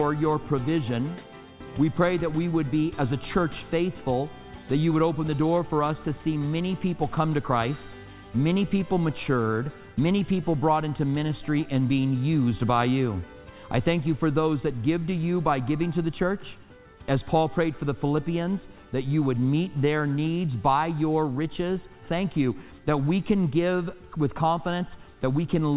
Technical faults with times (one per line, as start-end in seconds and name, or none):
none